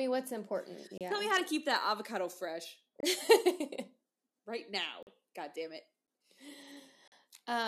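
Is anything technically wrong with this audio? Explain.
Yes. The audio has gaps between stream segments. Timestamps between consecutive 1.0 s segments don't line up, so the player inserts silence, cutting hard-edged holes into the speech at 0.98–1.01 s (30 ms), 3.00–3.03 s (26 ms), 5.03–5.07 s (43 ms), 6.07 s (10 ms) and 7.08–7.12 s (43 ms). Nothing is lost; the sound simply stops and resumes.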